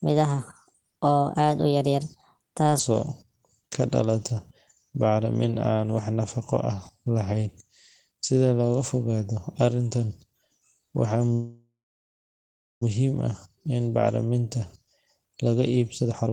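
Speech clip with three timing faults. From 0.00 to 2.79 s a section at the wrong speed runs 1.28 times too fast, so pitch rises by roughly four semitones and the voice sounds high and hurried, likely from being played against the wrong clock. From 11.33 to 12.83 s there is a call audio freeze: the last sound is stretched into a fading fill, and the final 1.11 s or so is silent before the audio resumes at "ah in bacriminta". The likely cause is delayed packets draining the jitter buffer. Nothing is lost, but 1.48 s of extra delay is inserted. From 16.03 s to the end at 16.33 s, a jitter buffer speed-up plays the audio at 167% speed with unchanged pitch. The receiver trims pitch-period-length pieces, around 0.2 s in total, to shed surplus buffered delay, and this makes the ending sound rushed.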